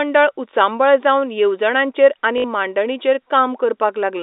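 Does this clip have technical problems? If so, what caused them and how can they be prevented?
Yes. After "उचांबळ जावन येवजणांचेर आनी" there is packet loss with last packet repeated, from 2.38 to 2.44 s. About 60 ms of audio went missing, which fits three lost 20 ms packets. The receiver replayed the last good packet to fill the gap. The run gives a brief robotic stutter with a buzz near 50 Hz. Proper packet loss concealment and forward error correction on the network link would prevent it.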